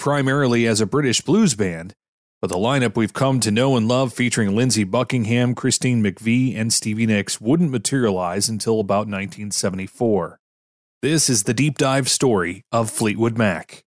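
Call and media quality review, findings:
No call or media quality findings to report.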